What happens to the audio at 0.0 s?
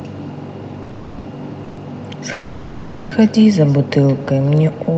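At the far end the call is playing through a loudspeaker, and its microphone feeds that sound straight back with no echo canceller to remove it. This echo with no canceller is already present at 0.0 s and continues throughout. The speech returns after the network round trip, roughly 150 ms later and about 18 dB quieter, so each phrase trails a faint, thin copy. The whole clip, echo included, is band-limited to 8 kHz by the call path.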